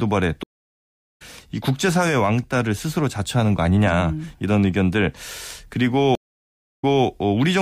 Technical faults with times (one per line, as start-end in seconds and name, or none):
0.43-1.22 stream reconnect
6.15-7.05 stream reconnect